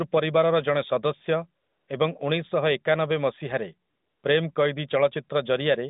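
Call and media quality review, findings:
AMR comfort noise at 1.62–1.88 s and 3.90–4.24 s (the second after "ଉଣେଇଶଶହଏକାନବେ ମସିହାରେ"): real background drops out for 260 ms and 340 ms, replaced by a smooth, steady hiss. Sender's voice activity detection halted speech frames; the receiver synthesised noise. Audio is band-limited to about 150 Hz–3.7 kHz, consistent with AMR-NB around 12.2 kbps.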